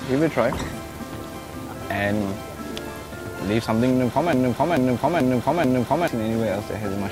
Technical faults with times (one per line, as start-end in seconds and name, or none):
0.00-7.11 video or display buzz
4.33-6.08 broken-record loop